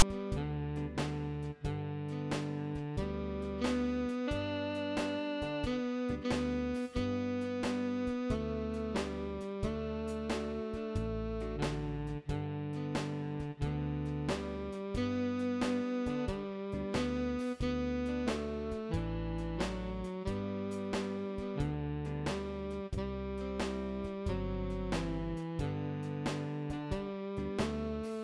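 Right at the top, from 0 to about 0.02 s, there's a case of file tags played as audio. A block of text metadata got read as if it were samples, so you hear a brief, hard-edged rasp, loud and offset to one side.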